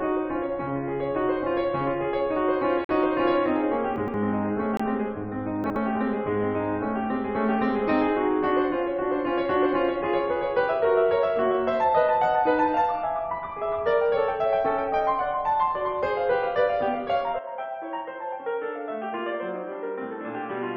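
This music clip has corrupt frames muted at 2.85–2.91 s and 4.77–4.81 s: the decoder rejected damaged compressed frames, leaving abrupt silent holes, the first fitting two frames. Chunks out of order at 3.96–4.14 s and 5.64–5.76 s: 60 ms blocks played late, giving jumbled moments with hard joins. At 17.39 s the input likely switched to a poorer device, so from there to the end the music turns dull and boxy, with nothing above 3.6 kHz, a level drop of about 5 dB, and new background noise about 40 dB below the music.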